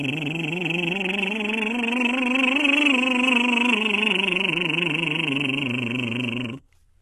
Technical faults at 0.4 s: HE-AAC compression

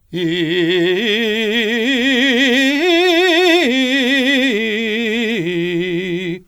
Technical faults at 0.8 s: generation loss

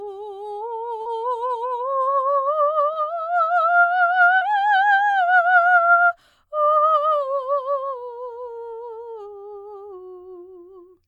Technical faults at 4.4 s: short concealed packet loss

